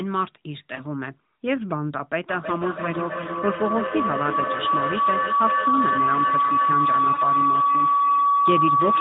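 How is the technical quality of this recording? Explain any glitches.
The recording has clear problems: two brief dropouts and a feedback howl that takes over from 2.29 s to the end. The band-limited mobile sound, with nothing above 4 kHz, comes from the AMR narrowband codec.

Lost AMR speech frames, at 0.76–0.83 s and 7.14–7.20 s: each gap fits a single 20 ms frame failing its checksum. The decoder fills in from the last good frame at falling gain, so you hear a short dip or warble. A spectrogram shows a brief smeared column; the waveform shows a small notch in amplitude.

Feedback howl, from 2.29 s onward: two devices in the same room joined the call, and the mic-to-speaker loop gains level on each trip. Around 1 kHz it builds into a tone up to about 4 dB above the speech, with the loop repeating roughly every third of a second. A spectrogram shows a bright horizontal band; the waveform envelope grows.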